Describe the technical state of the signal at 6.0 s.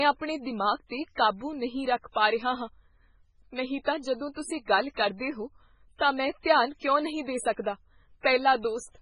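At 6.0 s a pre-echo runs from 5.96 to 6.01 s: a short hiss spreading about 42 ms ahead of an attack. The codec spread the quantisation noise meant for the loud onset across the whole transform block, including the quiet gap before it, so the onset sounds smeared.

Underneath, the speech carries heavy damage that is likely MP3 compression at a very low bitrate, consistent with about 16 kbps. Nothing remains above 10.5 kHz, and weak frequency lines drop in and out between frames, giving a watery, swirling texture with metallic edges on sibilants.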